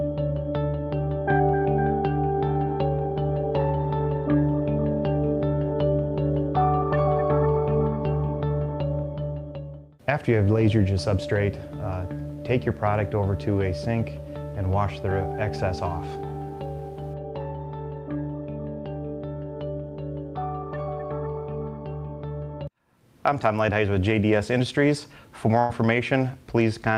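Right near the end, from about 25.59 to 25.71 s, there's a burst of packet loss. A short run of packets never made it in time, so the receiver papered over the hole by stretching out the last bit of sound it had for around 100 ms, letting it sag in level as it went. You hear it as a brief held, fading smear, and then the audio picks up with roughly 100 ms of material simply gone.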